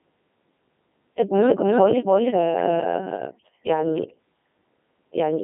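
Speech clip passed through the Codec 2 vocoder, with heavy damage consistent with its 3.2 kbit/s mode. Only pitch, voicing, energy and spectral envelope survive, so the voice is rebuilt from sine waves and sounds robotic and buzzy. It is confined to roughly 150 Hz to 3.6 kHz, with nothing above 3.8 kHz. From 1.46 s to 3.98 s, a doubled audio track, likely from a second, slower capture path, adds a full-band copy about as loud as the original, trailing by roughly a third of a second with no decay. It starts and stops abruptly.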